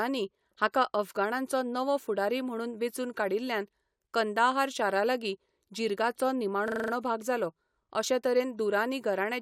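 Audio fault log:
6.68–6.92 s system hang loop: the system froze while the hardware kept replaying a 40 ms buffer six times, giving a 25 Hz buzzing stutter.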